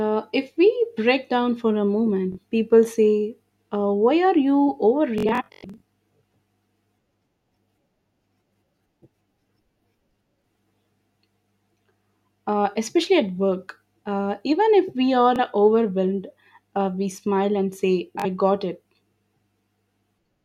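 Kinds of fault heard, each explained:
Bluetooth stutter: lost or late packets make the receiver replay its last slice of about 21 ms, giving brief repeats after "break down for a", "even if we are" and "we smile and say", and a scattered machine-gun buzz from 5.18 to 5.83 s.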